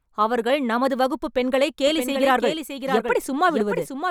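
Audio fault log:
1.87 s to end, doubled audio track: just after "அவர்கள் நமது வகுப்புப் பெண்களைக்" a second full-band copy of the speech cuts in abruptly, trailing about 0.7 s behind and roughly 5 dB quieter, with no decay or room colour, likely from a slower second capture path.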